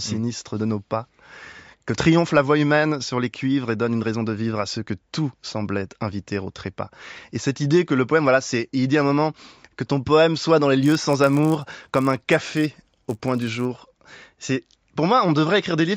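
From 10.82 to 13.65 s the resampler restarts on every block, erring at each 10 ms edge. This puts a 100 Hz buzz under the speech, visible as evenly spaced vertical lines on a spectrogram.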